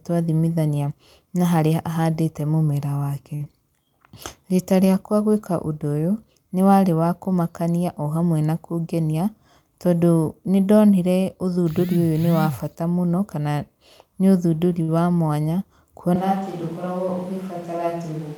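At 3.35 s a packet arrived late and the jitter buffer ran dry, producing a short stall from a late packet. The receiver held the last sound for about 47 ms, until 3.42 s, then resumed from the same point, so nothing is lost. The held sound stretches a syllable of the speech unnaturally, with a faint buzzy sustain. This also pushes the rest of the call 47 ms later.

Right after, from 3.44 to 3.48 s, comes a short concealed packet loss. About 20 ms of audio never reached the decoder, and the receiver patched the gap with 15 ms synthesised from the preceding sound before blending back into real audio. Coming straight after the stall, it adds a brief smear or wobble to the same stretch of speech.

Just after "kũmakania o hamwe na", from 9.04 to 9.28 s, there is a jitter buffer speed-up. The buffer had built up more audio than its target, so the receiver trimmed short pitch-period-sized pieces in quick succession, about 50 ms in total. 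Playback runs at 115% speed with the pitch unchanged, and the phrase sounds briefly rushed.

A second short stall from a late packet occurs from 14.82 to 14.90 s. Another packet missed its slot, and the receiver held the last sound for 56 ms before continuing without loss. You hear the same stretched, slightly buzzy sustain, and the stream's delay grows by another 56 ms.

From 16.16 s to the end, the sound changes abruptly in a way that is likely a switch to a distant microphone. The close signal seems to have dropped out in favour of a farther pickup. The voice turns hollow and roomy with thinner bass, the level drops by about 5 dB, and room noise rises to about 25 dB below the speech.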